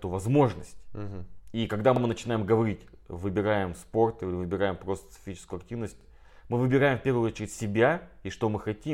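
At 1.96 to 2.01 s and again at 6.01 to 6.06 s, the speech shows overlapping chunks. The audio was handled in 4-second blocks, and each new block began about 48 ms before the previous one finished, so that slice of sound is played twice at the join. The result is a brief stutter or click at each boundary, recurring at the 4-second spacing.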